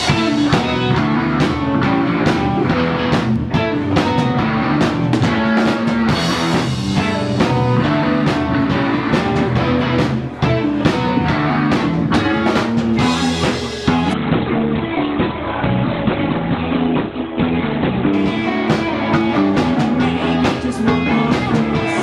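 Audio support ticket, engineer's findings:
Adaptive stream at a lower bitrate, 14.13–18.13 s: connection slowed, player switched renditions. Sudden, gapless treble loss above 4.3 kHz, codec artefacts, consistent with a low-bitrate Opus step-down.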